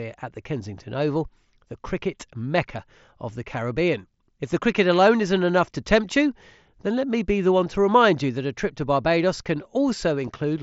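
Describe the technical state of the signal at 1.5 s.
At 1.5 s the speech is intact, with no fault at that point, carried over what sounds like a Bluetooth mSBC headset link that leaves nothing above about 7.7 kHz.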